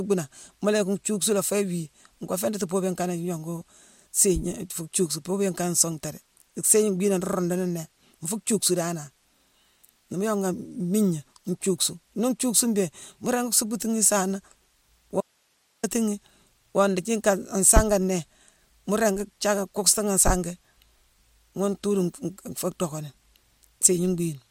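At 15.21 s the speech cuts out abruptly for 0.63 s, leaving only faint hiss far below the signal. This is an audio dropout to a faint residue, likely a live path losing its feed, not a pause.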